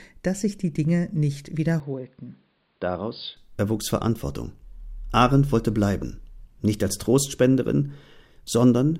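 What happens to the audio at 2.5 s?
The speech turns dull and narrow from 1.8 to 3.37 s, most likely because the input switched to a poorer device that passes nothing above 5 kHz. On a spectrogram the upper band goes empty there, and a faint new noise floor appears about 40 dB below the speech. The waveform steps down by about 5 dB. There's no gap at the change, and the full band returns abruptly at 3.37 s.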